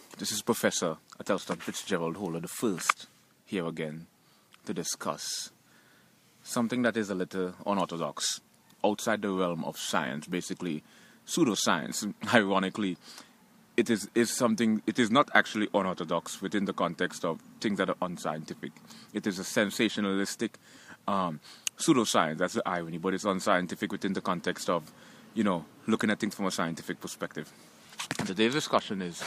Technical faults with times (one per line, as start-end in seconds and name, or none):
none